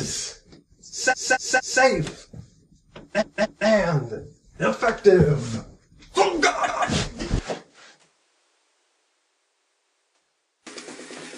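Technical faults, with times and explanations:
1.09–1.79 s, 3.18–3.65 s, 6.67–6.85 s, 9.55–10.10 s: repeated frames. Blocks of about 232, 232, 186 and 279 ms replay three, two, one and two extra times, producing a stutter that lengthens the audio. A spectrogram shows identical patterns tiled side by side.
7.39 s to the end: input switched to a poorer device. With no gap at the switch, the sound turns duller and drops by roughly 10 dB, and a new noise floor appears about 40 dB below the signal. The likely cause is a change to a lower-grade input. A spectrogram shows everything above 10.5 kHz abruptly blank, and the waveform envelope shrinks.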